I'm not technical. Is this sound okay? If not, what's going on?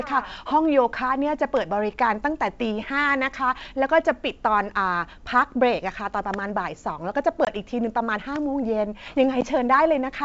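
No. The speech has two tiny dropouts, at 7.45 to 7.49 seconds and again at 9.41 seconds, where the sound cuts out abruptly and comes back with a slight click or roughness. This is packet loss on an ADPCM call: a couple of small chunks of audio went missing, then one more, and the gap was filled with silence. The receiving end briefly lost track of how loud the next sound should be, so it takes a moment to settle.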